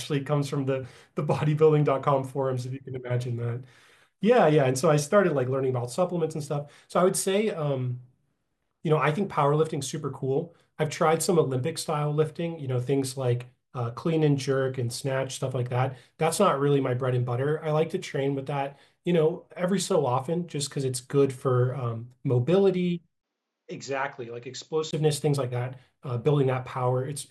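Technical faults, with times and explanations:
23.21 to 24.93 s, input switched to a poorer device: the speech suddenly goes dull and boxy, with nothing left above 7.6 kHz, drops roughly 5 dB in level, and picks up a faint new background noise sitting well under the speech. A tiny gap of about 20 ms marks the switch. The likely cause is the system changing its input mid-recording to a narrower-band microphone or headset profile, bringing its own tone, gain and noise before switching back.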